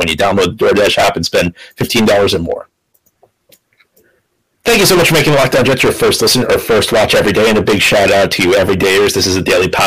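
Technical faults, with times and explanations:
Throughout, hard clipping: speech driven about 28 dB past full scale, nearly a third of samples flattened, giving harsh fuzz; waveform shows squared tops, spectrogram dense high-frequency smear.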